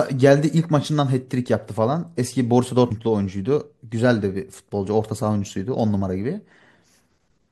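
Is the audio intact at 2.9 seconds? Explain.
No. At 2.9 s there is damaged data in a compressed stream: part of the encoded speech data arrives wrong. The decoder cannot parse the affected frame, falls out of step with the stream, and has to hunt for the next valid frame header before normal decoding resumes. What reaches the ear is a very short artificial blip or chirp lasting only milliseconds. It briefly replaces the speech with a burst of sound that does not belong to it.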